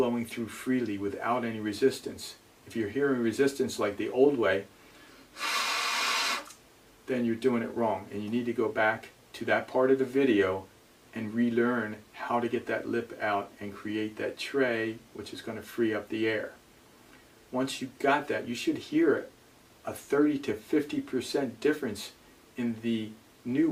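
No technical faults can be heard anywhere in the clip. Nothing in the audio calls for a timestamp or a closer look.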